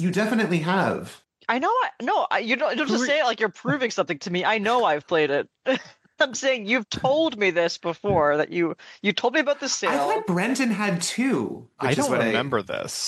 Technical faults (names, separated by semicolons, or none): none